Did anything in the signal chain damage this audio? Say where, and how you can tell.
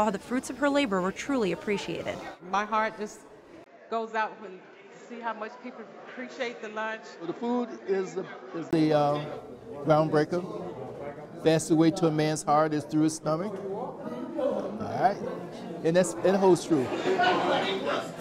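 Yes. At 3.64 s the input likely switched to a poorer device, at the driver stage, until 8.73 s. A 20 ms gap marks the change, then nothing above 7.6 kHz, roughly 10 dB lower level and a new noise floor well below the signal, before the fuller sound returns.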